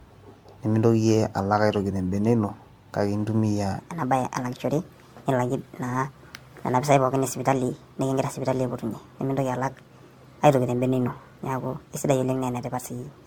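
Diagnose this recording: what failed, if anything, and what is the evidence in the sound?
Generation loss throughout, codec stage: the speech is swirly, hollow and smeared, with blurred attacks, likely from about five successive MP3 encodes at 96 kbit/s.

Section at the wrong speed from 3.79 s to the end: speech plays 1.28 times fast and about four semitones high, likely a playback clock mismatch.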